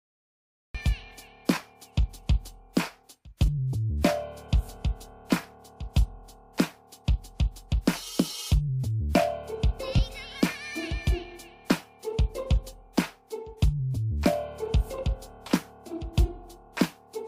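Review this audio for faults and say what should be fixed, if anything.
The audio opens on digital silence and then jumps straight into the middle of a sound at about 0.75 s, with no natural attack or fade-in. This is a cut-off start: recording or streaming began late, catching the sound already underway. Start capture a moment before the source begins, or add pre-roll, so the first onset is kept intact.

Brief noisy smears replace the tonal content at 1.56 s (10 ms), 3.46 to 3.48 s (20 ms) and 9.97 to 9.99 s (20 ms), briefly turning pitched sound into hiss-like texture. These are lost LE Audio frames: the LC3 decoder concealed each gap by reusing the last spectrum with randomised signs. The 10 ms gap fits a single lost frame and the 20 ms gaps fit two. Improve the Bluetooth link by shortening the distance, reducing 2.4 GHz interference, or allowing retransmissions, so frames arrive intact.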